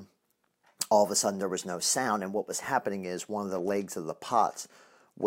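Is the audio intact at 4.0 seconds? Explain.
Yes, the audio is intact at 4.0 seconds, with no dropout, click, distortion or other fault at that point.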